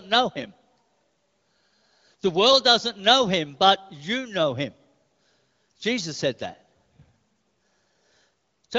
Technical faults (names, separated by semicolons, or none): none